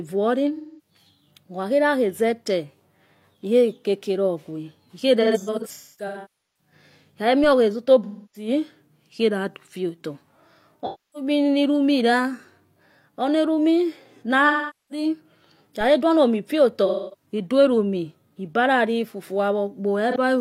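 The AAC decoder loses frames and conceals the gaps by re-synthesising from the last good spectrum. In the speech this leaves smeared, noisy, phasey patches at 0.56–0.90 s and 5.21–6.73 s. The second one is scattered over about 1.4 s, with roughly 0.4 s as its longest unbroken gap. At 7.44 s a DC step shifts the waveform's zero line, heard as a low thump while the speech carries on. The offset then drains away as a 5 Hz high-pass pulls it back to centre. Further concealment patches follow at 8.03–8.48 s and 10.85–11.29 s. The one at 14.47–15.05 s covers about 0.43 s of lost audio. A second DC step at 15.81 s thumps just before "duo no mo" and decays the same way. The AAC frame loss with concealment returns at 16.86–17.26 s and once more briefly at 20.11 s, a blip of about 40 ms.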